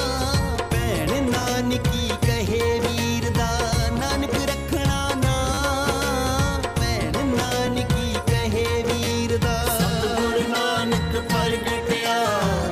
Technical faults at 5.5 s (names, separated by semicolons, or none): repeated buffer